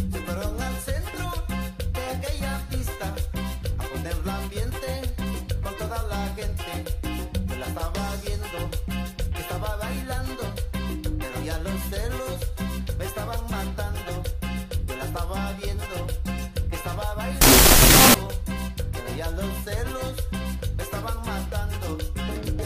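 From 17.41 to 18.14 s, loud harsh noise swamps the sound, which lies buried underneath at half speed and an octave low. This is a wrong sample width: 16-bit integer data read as unsigned 8-bit, so each sample splits into two values, and the low bytes become noise.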